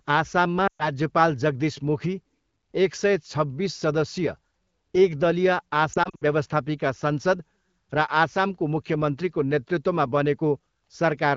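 A speech clip coded with AMR wideband (HD Voice) has two bursts of lost AMR speech frames. From 0.67 to 0.88 s, about 120 ms of speech drops out. The decoder stretches the last good pitch and vocal tract settings at falling gain, so the voice smears and fades before returning rough. From 5.93 to 6.24 s, 140 ms is lost in scattered gaps over 280 ms, the longest 60 ms. That gives a choppy warble. Radio errors causing failed frame checksums fit both.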